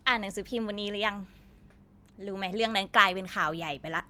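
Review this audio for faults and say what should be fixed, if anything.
Nothing needs fixing; no faults are audible here.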